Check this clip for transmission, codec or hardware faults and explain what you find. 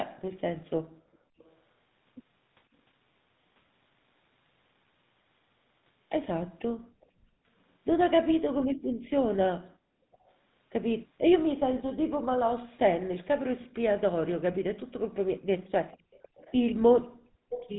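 Three faults are present: GSM full-rate coding throughout, background gated by the echo canceller, and echo leak.

The GSM full-rate codec runs through the whole clip. Pulse-driven vocal-tract coding, consistent with the 13 kbps full-rate codec, gives a buzzy, gravelly roughness and nothing above 3.9 kHz. That gravel, not just the band limit, distinguishes it from plain narrowband filtering.

Background gated by the echo canceller occurs at 0.79–1.38 s, 6.75–10.21 s and 15.96–17.5 s. The canceller clamps the microphone, dropping room sound by about 40 dB for roughly half a second, a second and a half, and half a second. The silence, not a copy of the voice, sets it apart from echo leak.

Echo leak occurs at 1.38–1.56 s, 6.59–7.06 s, 10.12–11.6 s and 16.12–17.71 s. It is likely residual loudspeaker pickup the canceller missed. A copy trails by 497 ms, about 35 dB below the speech early and loudest near the end, about 15 dB below. 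That fixed delay distinguishes it from room reverberation.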